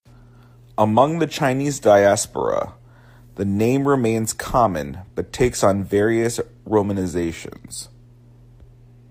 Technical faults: none

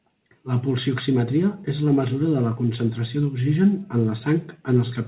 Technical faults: none

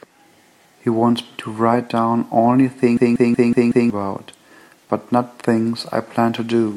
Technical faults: system hang loop

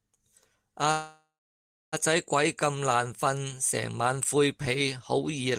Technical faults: call audio freeze

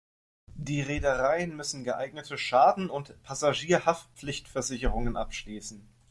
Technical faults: none

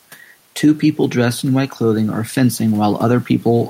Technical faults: gain pumping

